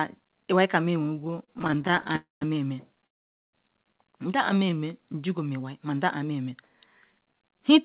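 Repeated stalls (stutter) run from 1.14 to 2.16 s, just after "iwai ka mel": the jitter buffer emptied 28 times, each gap up to 32 ms bridged by continuing sound, so about 295 ms of drag chops the audio. A call audio freeze follows at 2.16 to 2.43 s. Likely held-up packets emptied the buffer; the sound trails off and goes silent for about 160 ms, then resumes where it stopped. A second freeze at 3.07 to 3.55 s sounds the same, with a brief continuation before about 460 ms of silence. A jitter buffer speed-up at 7.12 to 7.77 s drops around 70 ms of pitch-period slices to shrink the delay, so the speech runs at 110% and sounds hurried at the same pitch. Throughout, nothing is present above 4 kHz, which fits a telephone-band call codec.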